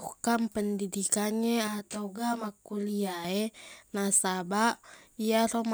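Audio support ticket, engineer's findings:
Rough, slightly doubled speech 1.67–3.25 s. Channel delay (comb filtering) at mono sum, one side around 20 ms late, notches from near 30 Hz. Fixed notches, unlike flanging's sweep.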